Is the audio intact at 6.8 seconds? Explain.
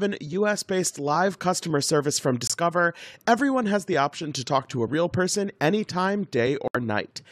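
Yes, the speech is back by 6.8 s, but only just: a corrupt frame muted gap runs from 6.68 to 6.76 s, about 88 ms, which fits roughly three codec frames. Damaged compressed data was rejected by the decoder, and the player substituted digital silence. The sound cuts off abruptly into a clean hole and resumes on time. A buffer underrun would stall the timing, and concealment would fill the gap with smeared sound rather than true silence.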